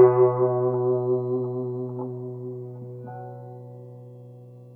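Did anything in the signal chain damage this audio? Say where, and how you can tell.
No, nothing in this music stood out on listening as damage from any stage of the signal chain.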